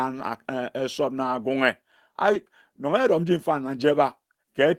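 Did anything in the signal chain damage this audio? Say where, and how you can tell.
Yes. At the network jitter buffer, right after "na agunghe", a skip ahead at 2.33–2.35 s drops about a second of speech. The sides join directly, with no silent gap as a dropout would leave.

From 2.49 to 4.66 s the jitter buffer speed-up trims pitch periods, running the speech at 108% to shed about a fifth of a second. Pitch stays unchanged, unlike a resampling error.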